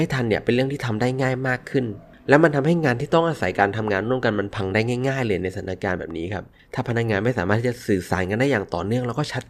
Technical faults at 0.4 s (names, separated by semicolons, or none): none